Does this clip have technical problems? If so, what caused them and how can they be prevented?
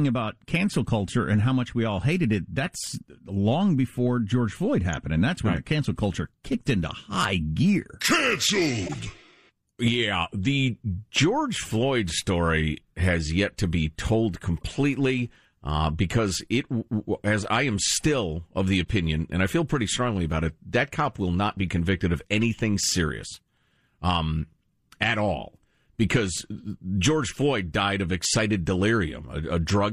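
Yes. The speech has four short glitches from corrupt frames being decoded. Damaged bits in compressed frames were played anyway, so misread gains put energy at wrong frequencies. Each is a brief chirp or blip spanning a couple of frames. The first is at 8.86–8.96 s and fairly loud, near -20 dBFS. The second is at 14.57–14.63 s, after "yet to be told". The third is at 18.85–18.87 s, between "am still of the" and "and I feel pretty". The last is at 22.42 s, after "not be convicted of", and is again loud. Checksums with concealment or error-protected transport would stop damaged frames from being played.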